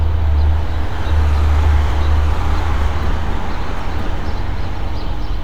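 From the start of the clip to its end, a doubled audio track is present. A second, full-band copy of the sound trails the first by about a second, at roughly the same level, so every event is heard twice with no decay or room colour on the repeat. It is likely caused by the signal being captured again through a slower path, or by an edit leaving two copies out of step. On a waveform, each sound reappears as a near-identical shape about a second later. The spectrogram shows every pattern duplicated at that fixed offset.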